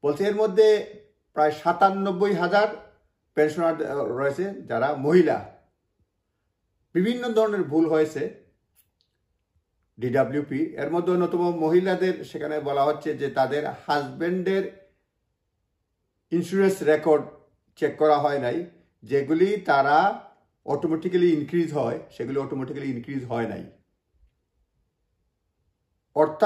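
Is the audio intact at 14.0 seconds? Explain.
No, sample clock jitter runs from 10.88 to 14.96 s. The converter's timing wanders by roughly 3 microseconds, so steep, loud, bright passages gain a rough hiss around 40 dB below the signal.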